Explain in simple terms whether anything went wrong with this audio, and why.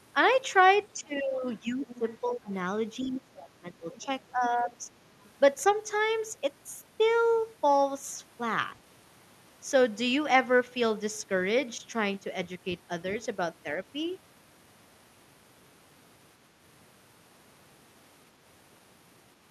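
The voice keeps dipping and thinning out, sometimes almost vanishing, from 0.93 to 2.06 s, 2.22 to 2.51 s, 3.03 to 4.09 s and 4.33 to 4.90 s. This is speech suppressed in double talk, likely because an echo canceller turned everything down when both people spoke at once.

A faint second voice slips in underneath at 1.88 to 2.11 s, 3.92 to 4.05 s and briefly at 5.24 to 5.29 s. This is the other side's voice leaking through, likely loudspeaker sound that the echo canceller didn't fully remove from the microphone.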